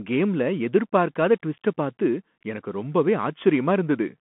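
A speech clip carrying a Bluetooth CVSD headset codec throughout: every sample is a one-bit up-or-down step, which fits a 64 kbit/s stream, so s sounds turn scratchy and granular hiss sits underneath. A spectrogram shows an empty band above 3.8 kHz and a line band of roughly 150 to 3400 Hz.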